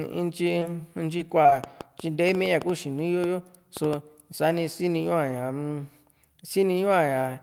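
A speech clip with three network and electrical faults. At 0.59 to 0.63 s there is a brief smear where about 20 ms of sound is missing: short concealed packet loss, where a late packet's hole was filled by extending the preceding sound and blending back into the real audio. From 1.17 to 1.54 s the sound turns choppy, with pieces dropping out. This is repeated packet loss: several short gaps, the longest 20 ms, each patched by continuing the last sound, so roughly a fifth of that stretch is synthetic fill. From 1.64 to 3.94 s a train of clicks ticks over the audio, including the pauses. There are around ten sharp, similar pops at an uneven pace, close to five per second, peaking roughly 10 dB above the speech. These likely come from electrical interference or a faulty connection or power supply injecting repeated pulses.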